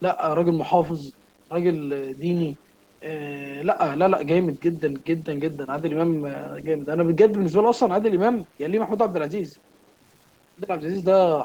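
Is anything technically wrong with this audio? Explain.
Yes. Two faults run through the whole speech clip.

Low bit depth without dither is present from start to finish. The grit follows the voice and thickens on quiet passages. It sits roughly 35 dB below the speech. That fits likely 8-bit truncation with no dither, so the rounding error tracks the signal.

Opus voice compression is also audible throughout. The damage is plain: the speech sounds hoarse and slightly robotic. The codec seems to be in hybrid mode, with linear prediction below 8 kHz and a coarse transform layer above. The band still reaches 20.1 kHz. The coarseness fits a low bitrate around 16 kbps.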